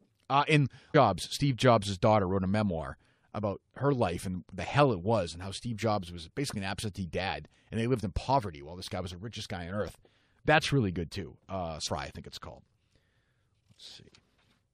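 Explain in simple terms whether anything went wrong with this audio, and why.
Two quick glitches crop up in the speech, both from damaged data in a compressed stream. The first is a tiny blip at about 0.94 s, and the second is a short glitch from 11.85 to 11.88 s, right before "I think it's called". At those spots some bytes of the compressed audio got corrupted, so the decoder misread them, briefly lost its place, and had to hunt for the next clean chunk. That stumble is the blip you hear.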